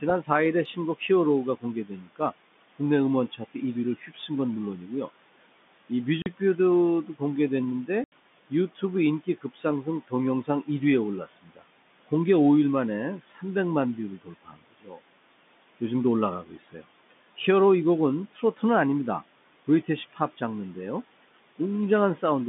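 A phone-band speech recording carries noise suppressor artifacts from start to end: the room noise, about 19 dB under the speech, is pulled down by about 17 dB in the gaps and surges back beneath each phrase. The same suppressor also cuts speech, mistaking soft parts for noise. It is heaviest from 0.01 to 12.1 s, with around a second and a half of quieter sounds and endings dropped by up to about 17 dB, and recurs from 13.23 to 17.39 s (up to about 18 dB), 18.31 to 18.62 s (about 12 dB) and 19.67 to 20.41 s (about 15 dB). In the waveform these appear as sudden dips where the envelope should taper. Packet loss filled with silence punches hard-edged holes at 6.22 s (40 ms) and 8.04 s (80 ms), which fits 20 ms packets. These show as flat silent gaps and blank vertical stripes.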